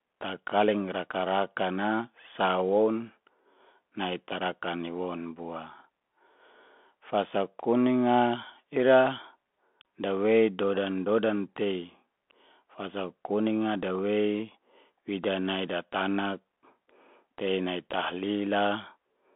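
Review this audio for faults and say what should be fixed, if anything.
Bluetooth CVSD headset codec, throughout: a one-bit delta coder tracks the waveform, so the band stops near 3.8 kHz, sibilants turn scratchy, and granular hiss remains, consistent with 64 kbps CVSD. Prevent it by recording through a wideband (mSBC or LC3) link or a wired microphone instead of the narrowband headset profile.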